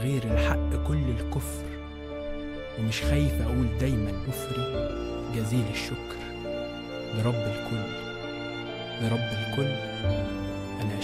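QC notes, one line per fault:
4.25–4.27 s, skip ahead: about a second of audio was discarded, likely from an overflowing jitter buffer, and playback joins the two sides directly with no fill.
4.67–4.95 s, jitter buffer speed-up: short pitch-period pieces were repeatedly cut to shed excess delay, totalling about a tenth of a second, so the sound runs at 133% speed with unchanged pitch and seems hurried.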